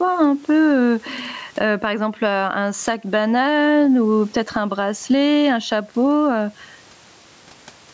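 Gain pumping runs throughout: the gain swings by around 15 dB as it is pulled down on each loud sound, likely from excessive input gain feeding a fast limiter.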